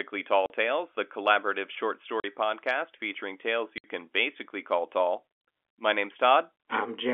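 Three holes of packet loss filled with silence cut through the speech, each with hard edges: 0.46 to 0.50 s (40 ms), 2.20 to 2.24 s between "the collaborative short" and "podcast featuring tales" (40 ms), and 3.78 to 3.84 s before "can basically call tall" (60 ms). The gap lengths fit two and three lost 20 ms packets played out as silence, set against the narrow, telephone-band G.711 sound of the line.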